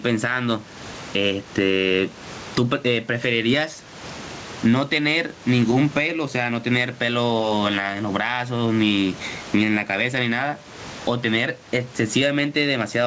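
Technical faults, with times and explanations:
Throughout, gain pumping: the gain is pulled down on each loud sound, swinging roughly 20 dB, so loud and soft parts end up closer in level and the speech sounds squashed. The likely cause is input gain set far too high driving a fast limiter.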